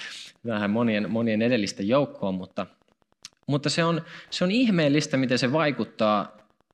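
Throughout the speech, Wi-Fi interference adds faint ticking about ten times a second, roughly 40 dB below the voice: a nearby radio's beacon, every 102.4 ms, is rectified by the audio circuit. A spectrogram shows evenly spaced thin vertical broadband lines.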